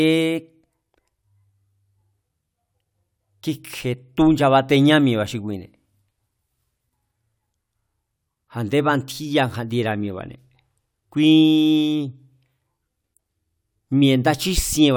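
No technical faults can be heard in this recording.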